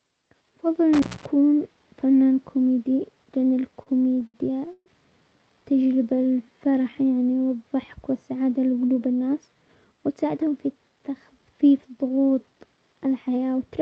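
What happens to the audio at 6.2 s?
At 6.2 s the sound is inside a jitter buffer slow-down lasting from 6.02 to 6.96 s. The receiver repeats single pitch periods to add 152 ms, so playback runs at 85% speed with unchanged pitch. On a spectrogram, harmonics keep their frequencies but stretch sideways; the waveform shows repeated, near-identical cycles.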